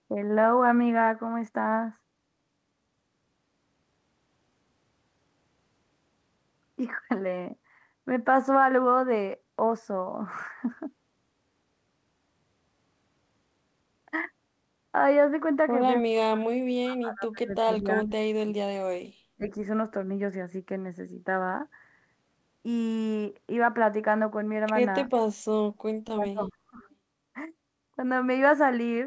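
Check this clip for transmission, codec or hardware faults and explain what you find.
Three dropouts of speech suppressed in double talk sound like the talker being ducked while the far side speaks. From 16.02 to 18.72 s it sinks deeply and breaks up, shallower at 19.36 to 19.59 s, deep again at 25.97 to 26.81 s. The likely cause is an echo canceller mistaking the talker for loudspeaker echo. The call path, consistent with G.722 at 64 kbps, carries nothing above 8 kHz.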